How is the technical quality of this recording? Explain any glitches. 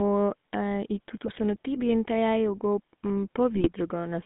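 The technical quality is poor: the whole recording passed through a low-rate mobile codec, and two short bursts of transmission errors break it up further.

The speech was coded with the GSM full-rate codec throughout. It models the vocal tract and drives it with a thinned, pulse-like excitation, at a rate that fits 13 kbps. The band runs only from 150 Hz to 3.6 kHz, and the speech carries a plainly audible buzzy, gravelly roughness.

GSM bit errors hit the signal from 1.26 to 1.39 s and from 3.55 to 3.70 s, the second burst being heavier. Corrupted filter, pitch and gain values reached the decoder, which fits about six damaged frames each time. The speech lurches into squawks, pops and gargling.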